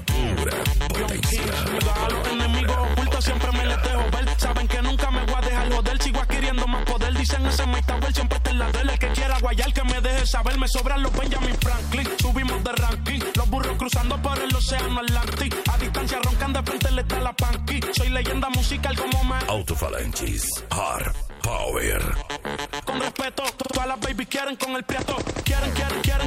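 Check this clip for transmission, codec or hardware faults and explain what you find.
Nothing stood out on listening to this clip.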